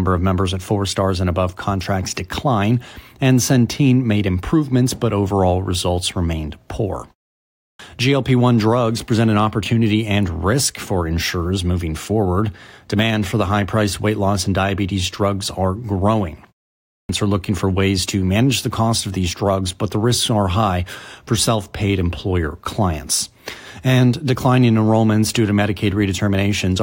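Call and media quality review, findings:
Clipped start after a pause: 7.45–7.79 s after "overall results remained poor", and 16.74–17.09 s after "diabetes drugs are growing", before "are looking for ways". About 0.34 s and 0.35 s of onset swallowed after short pauses. Output device sleeping in silence, slow to wake. Speech itself is lost, not just background.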